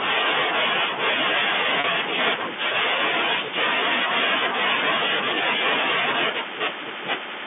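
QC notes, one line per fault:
1.80–1.84 s, packet loss with pitch repetition: about 40 ms of the stream went missing, which fits two lost 20 ms packets, and the receiver bridged the hole by looping the last pitch period of the speech. The gap is too short for the loop to fade to silence, so it comes through as a brief, slightly held buzz before the live speech cross-fades back in, still within the narrow G.711 telephone band.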